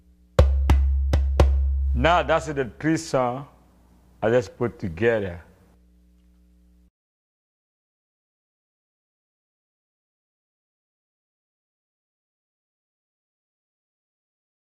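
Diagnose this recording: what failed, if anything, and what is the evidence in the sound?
Nothing in the chain failed, with no audible fault at any stage from wiring through conversion, processing, transmission, storage or playback.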